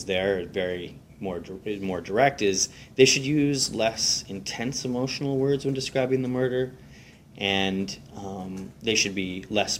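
Throughout the clip a fine hiss and grittiness ride on the sound, thickening on loud and bright passages and disappearing in silence. This is sample clock jitter: the converter's timing wanders by a microsecond or two, leaving error around 35 dB below the signal.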